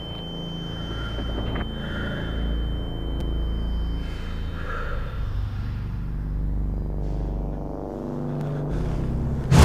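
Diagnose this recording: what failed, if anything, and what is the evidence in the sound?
The driver or buffer stage hiccuped: two repeated buffer events, at 3.20 s and 8.41 s. Each is a tiny click-buzz from a roughly 5.8 ms slice replayed with hard joins, twice at 3.20 s and once at 8.41 s, which fits a 256-sample buffer. Nothing seems to go missing.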